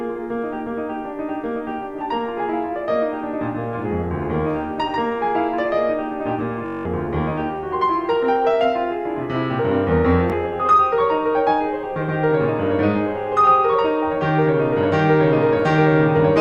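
A display or video cable couples into the music for the whole clip, leaving a low 75 Hz buzz with hash above it, roughly 40 dB down. Bluetooth stutter follows: late or lost packets make the receiver replay its last buffer, causing a machine-gun stutter from 6.66 to 6.86 s (192 ms missing, consistent with about nine packets) and a single short repeat at 10.30 to 10.32 s, after which the music resumes further along.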